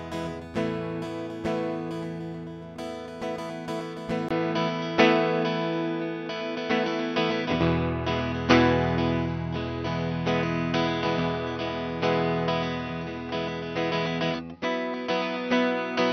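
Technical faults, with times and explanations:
4.29 to 16.13 s, input switched to a poorer device: after a 20 ms dropout the music loses everything above 6 kHz and stays dull and boxy to the end. The level shifts by roughly 5 dB, and a new, faint noise floor appears, around 45 dB beneath the music. This is likely a mid-recording change of input to a lower-grade microphone or a headset call profile, whose narrower passband, different gain and self-noise replace the original path.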